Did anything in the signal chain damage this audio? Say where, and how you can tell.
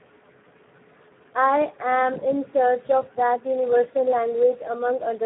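Yes. The damage comes from the Speex codec at the encoding stage, and it runs through the whole speech clip. The band is cut to about 150 Hz to 3.6 kHz, with nothing above 3.8 kHz. Because the bitrate is low, around 8 kbps, the excitation gets too few bits, so the voice comes out hoarse and noisy. On a spectrogram you would see a hard ceiling near 3.8 kHz, with blurred, smeared harmonics under it.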